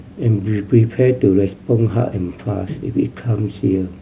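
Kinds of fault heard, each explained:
No technical faults can be heard in the speech recording, and the signal stays stable and intact throughout.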